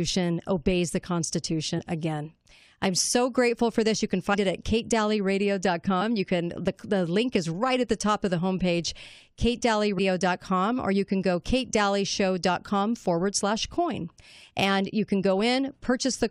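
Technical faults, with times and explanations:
1.78–1.80 s, 4.33–4.35 s, 6.00–6.02 s and 9.97 s: compressed frames skipped. At each point the speech jumps forward, losing about three, three, two and seven frames of roughly 23.2 ms each, so about 70, 70, 50 and 150 ms go missing. Unlike a dropout, there is no silent gap.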